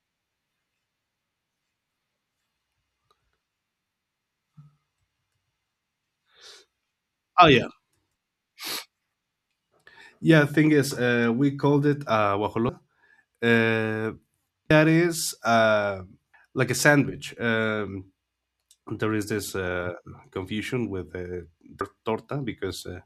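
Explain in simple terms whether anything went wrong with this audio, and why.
Compressed frames were skipped four times in this speech recording. At 12.69 s (right after "we called it uh") and at 14.70 s (just before "is uh"), about a sixth of a second of audio vanishes. At 16.34 s (after "is uh") and at 21.81 s, about a third of a second goes missing. The jump lengths fit whole blocks of around 32 ms being dropped.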